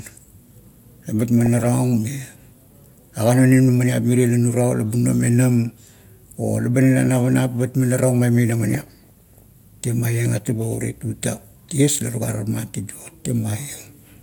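Speech with DAB burbling from 1.46 to 1.68 s and 8.75 to 9.45 s: weak reception lets bit errors through into the MP2 data, so single sub-bands jump in level for up to a frame. Unlike steady low-bitrate smearing, it comes in bursts.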